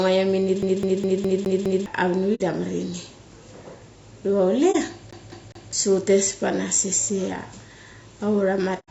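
Throughout the speech, the coding was likely done with low-delay AAC compression, the AAC-ELD mode used for video calls. At a low bitrate the damage is plainly audible: a rough, grainy texture with noise filling the gaps between harmonics and a thin, synthetic-sounding top band, which fits a low bitrate of around 32 kbps.

From 0.62 to 1.86 s the playback is CD stuck on one turn. The pickup is thrown back to the same point on each revolution, so a 206 ms slice of audio repeats six times. Each pass is separated by a brief mute at the jump, producing the fast, evenly spaced stutter of a skipping disc.

From 2.34 to 2.41 s there is AAC frame loss with muting. The missing data fits two lost frames whose spectrum the decoder replaced with silence. The overlapping windows then fade the speech down and back up, leaving a soft-edged gap of about 60 ms.

A shorter dropout of the same kind occurs from 4.71 to 4.75 s. 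About 30 ms of sound fades out and returns, which points to a single lost frame.

From 5.11 to 5.73 s the disc sticks again, this time on a 206 ms loop of later audio, repeating three times with the same short mutes between passes.

At the very end, from 8.79 to 8.90 s, AAC frame loss with muting removes about 90 ms. This fits three lost frames, and the sound fades into silence just before the clip stops.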